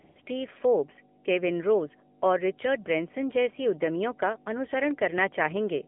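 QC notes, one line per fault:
Throughout, mains hum: a ground loop or nearby transformer has coupled the 50 Hz power line into the signal, so a steady low tone with a few low harmonics sits under the speech, only about 10 dB below it.
Throughout, AMR narrowband mobile codec: the speech has passed through AMR-NB at 7.4 kbps over a 200 Hz to 3.4 kHz line, so nothing above that band survives and the pulse-driven vocal-tract model leaves the voice thin, buzzy and plainly synthetic.
0.00–0.16 s and 0.22–0.26 s, AMR comfort noise: the phone treated the talker as silent and sent no speech frames, for 155 ms and then 40 ms, so the receiver filled the gaps with smooth synthetic noise that switches in and out just before "फोर्ब्स केविन रोज और".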